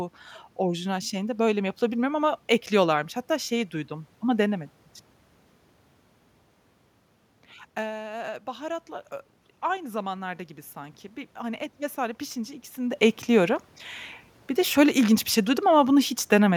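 At 9.66 s, after "baharatla ö i", automatic gain rising begins. The input had dropped by about 13 dB. The gain control lifts its gain gradually, by about 4 dB, until 12.7 s, before "de ekliyorum". Voice and room noise swell together.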